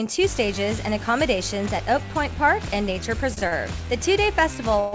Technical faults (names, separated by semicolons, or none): short stall from a late packet; call audio freeze